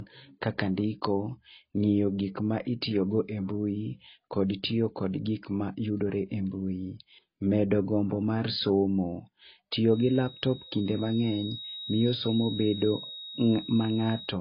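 From the start, the speech carries transcoding between lossy codecs, likely a low-rate AAC pass followed by MP3. Mixed smearing and swirling artefacts stack up, and a spectrogram shows everything cut off above 5.2 kHz.

From 9.85 s to the end, a feedback whistle sits well below the speech, likely from a speaker-to-microphone loop held at the edge of feedback. It appears as a thin horizontal line at 3.8 kHz that slowly brightens and fades.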